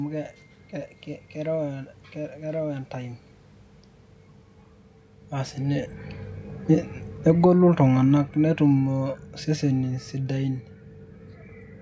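Speech recording with automatic gain falling from 7.13 to 10.56 s. The gain control, judging the input too loud or its background noise too strong, steadily lowers its gain by about 8 dB. The level sinks gradually over those seconds, and the room noise drops with the voice. The earlier change in level around 5 seconds is different: it comes from the talker moving relative to the microphone.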